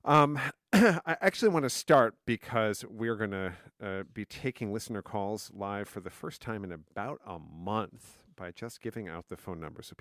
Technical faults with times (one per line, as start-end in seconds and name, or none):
none